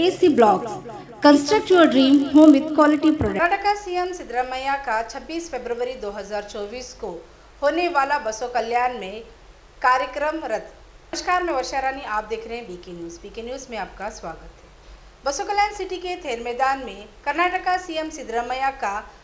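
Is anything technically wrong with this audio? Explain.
Yes. The audio shows a resampler restarted on every block throughout. The conversion from 48 kHz down to 16 kHz was done on 20 ms blocks in isolation, so each block edge was computed without its true neighbouring samples and carries a small error. Those errors recur 50 times a second, heard as a buzz at 50 Hz riding under the signal and vanishing in silence. On a waveform, tiny discontinuities appear at every 20 ms boundary; a spectrogram shows evenly spaced vertical striations, with harmonics of 50 Hz wherever there is signal.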